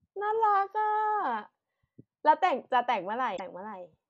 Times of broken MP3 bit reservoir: 3.36-3.40

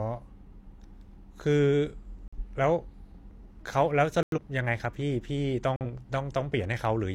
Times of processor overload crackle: none

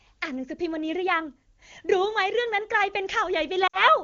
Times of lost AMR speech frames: 3.67-3.83

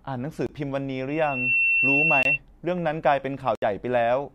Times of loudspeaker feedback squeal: 1.08-2.39

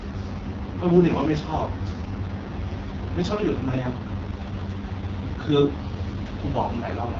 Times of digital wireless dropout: none

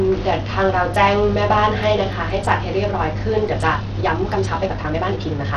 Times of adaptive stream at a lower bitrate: none

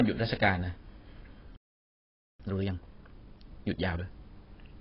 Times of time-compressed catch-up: 2.40-4.06

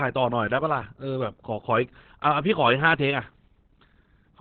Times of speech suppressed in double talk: none

